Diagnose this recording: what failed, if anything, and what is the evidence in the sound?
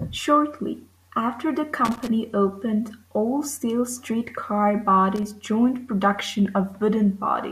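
Two short, irregular bursts of scratchy crackle break into the speech: one from 1.85 to 2.08 s, right after "after the", and a shorter one from 5.16 to 5.23 s. This is loose connector crackle in the analogue wiring. A worn or dirty contact was intermittently making and breaking, chopping the signal on and off, with each reconnection of any DC on the line adding a pop. The result is a ragged, uneven texture rather than clean clicks.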